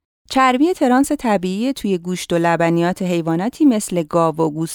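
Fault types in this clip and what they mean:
Resampler restarted on every block: the rate conversion, which points to 44.1 kHz going to 48 kHz, starts fresh on each 10 ms chunk, so every chunk edge gets a small error. In this speech you hear it as a 100 Hz buzz riding along wherever there's signal.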